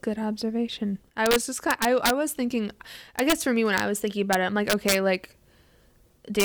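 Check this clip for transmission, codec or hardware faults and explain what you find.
The clip has integer overflow at 1.26–2.10 s, 3.19–3.33 s, 3.78–3.80 s, 4.33 s, 4.70–4.95 s and 6.40–6.44 s. Speech peaks went past the integer limit by up to about 4 dB and wrapped to the opposite sign instead of being limited, so they crack sharply rather than flattening as clipping would.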